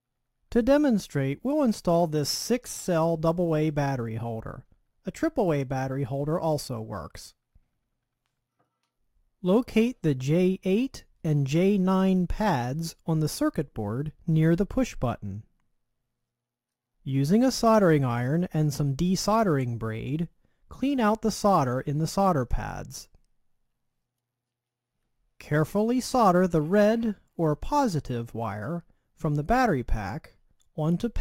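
Sample clock jitter runs throughout the clip: the converter's clock wavers by a few microseconds, so samples land early or late and steep waveform slopes pick up error about 30 dB below the signal, heard as a hiss that swells with loud, bright passages.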